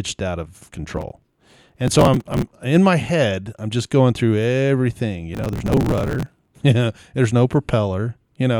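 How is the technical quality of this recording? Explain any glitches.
The recording is marred by two bursts of processor overload crackle in the speech. The first runs from 0.94 to 2.45 s, between "out of" and "in my head I'm"; the second from 5.34 to 6.56 s, after "just going through everything". The processor repeatedly missed deadlines for buffers of a few milliseconds, dropping each one and leaving hard-edged skips. Heard as gritty tearing, these show as dense vertical broadband streaks on a spectrogram and abrupt discontinuities in the waveform.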